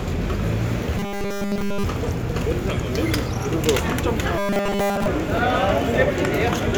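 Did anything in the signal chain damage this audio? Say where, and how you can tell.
Yes. From 0.98 to 1.84 s and again from 4.38 to 5.07 s the sound turns into a rigid metallic buzz fixed at 200 Hz: robotic sound from repeated short buffers. This is likely a starved driver or buffer stage replaying a 5 ms block almost continuously.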